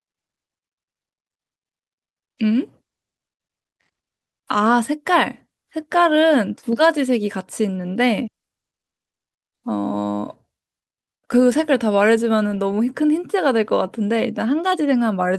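A short speech recording with no technical faults to report. Nothing audible points to a problem in how it was captured, processed or delivered.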